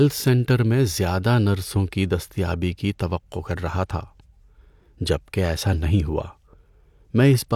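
From about 1.47 s to the end there's channel delay (comb filtering): one side runs late by roughly a single sample, about 0.02 ms. Summed to mono, that cancels the very top, with the first notch around 20 kHz, so the speech goes slightly dull.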